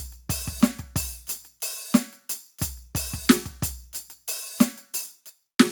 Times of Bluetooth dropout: none

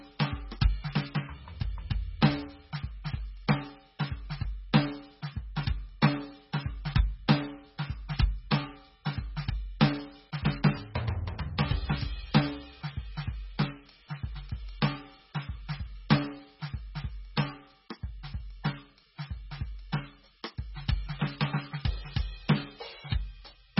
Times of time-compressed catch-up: none

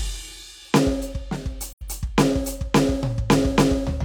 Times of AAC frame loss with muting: 1.69-1.82

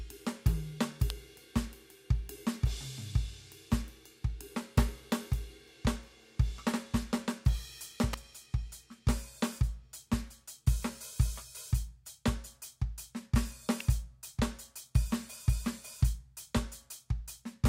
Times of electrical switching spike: 1.10, 8.13, 13.80

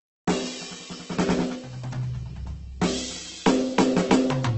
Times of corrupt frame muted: none

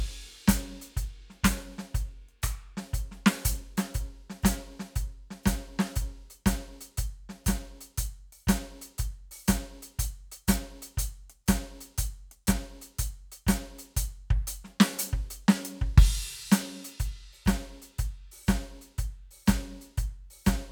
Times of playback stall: none

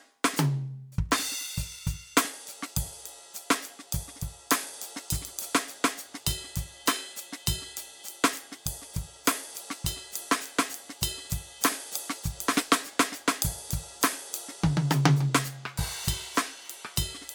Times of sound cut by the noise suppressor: none

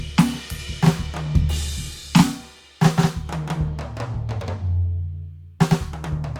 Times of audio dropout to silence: none

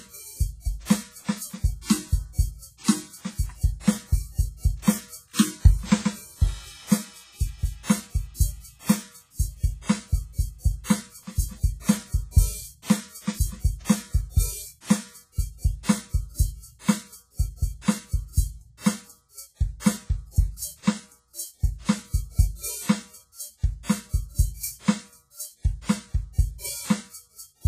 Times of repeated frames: none

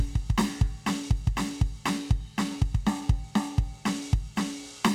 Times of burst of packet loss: none

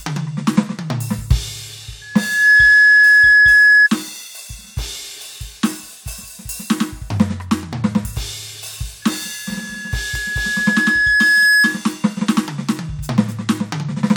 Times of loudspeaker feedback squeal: 2.01-3.89, 9.02-11.86

